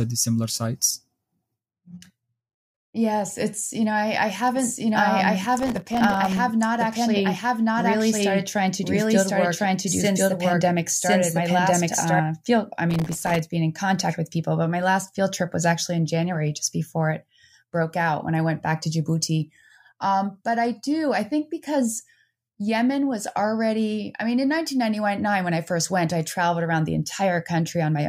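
From 4.56 to 12.2 s the speech has a doubled audio track: a second, full-band copy at about the same level trails roughly a second behind, likely from a second capture path or misaligned edit. Unlike echo or reverb, it has no decay and starts and stops abruptly.

From 5.56 to 6.37 s, and again from 12.91 to 13.39 s, processor overload crackle occurs: many buffers, each well under a millisecond, miss their deadline again and again and are left silent. The tiny gaps merge into gritty tearing rather than the single clean hole of a dropout.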